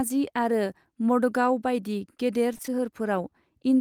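From 2.53 to 2.84 s, the speech breaks up with repeated packet loss. Five short holes arrive in quick succession, the longest 21 ms. Each is patched by extending the preceding sound. Roughly a quarter of the span is patched this way, and the speech turns choppy.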